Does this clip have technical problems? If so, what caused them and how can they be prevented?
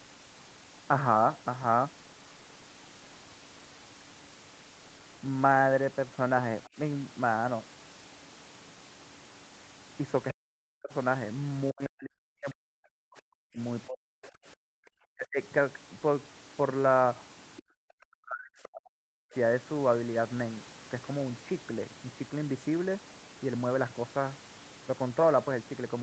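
Yes. Other side's voice leaking through appears as brief scraps at about 6.64 s, 14.23 s and 17.57 s, each only a few hundredths of a second long and faint, roughly 25 to 30 dB below the talker. The likely cause is a loudspeaker on the talker's device whose playback reached the microphone and was not fully removed by the echo canceller, so short fragments of the far voice slipped through. Using a headset, or tuning the echo canceller for this device's speaker-to-microphone path, would prevent it.

Speech suppressed in double talk occurs at 10.32 to 10.92 s, 11.71 to 13.59 s, 13.86 to 14.38 s, 14.96 to 15.39 s and 17.90 to 19.32 s, where the talker's speech sinks by as much as about 40 dB or drops out in pieces. This is likely the echo canceller failing to tell the near talker from the loudspeaker echo while both sides spoke, and ducking everything together. A headset or a canceller with better double-talk detection would prevent it.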